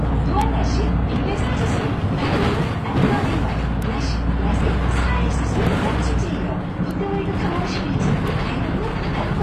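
From start to finish the treble sounds gritty and plainly metallic, with nothing above 14.9 kHz. This is likely HE-AAC compression, at a rate consistent with around 24 kbps, where the upper band is rebuilt from copied lower bands rather than coded directly.

Sharp, isolated ticks land at 0.41, 3.82, 5.67, 6.91 and 8.28 s, each broadband and unrelated to the surrounding sound. These are bit error spikes: a flipped bit throws one or a few samples off by a power of two before they snap back.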